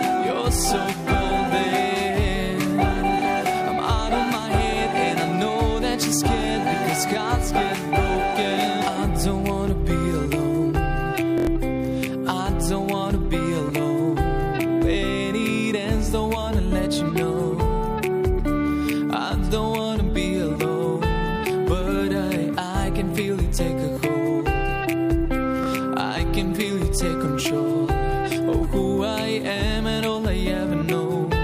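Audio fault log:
11.38–11.47 s: repeated buffer. New audio arrived late, so the device replayed its last 23 ms block four extra times. It is heard as a short, hard stutter with a sharp join at each repeat. The block length fits a 1024-sample buffer. About a tenth of a second of sound is lost.
25.64–25.66 s: repeated buffer. The same 23 ms block plays once more. The result is a hard join where the piece repeats, and about 20 ms is lost.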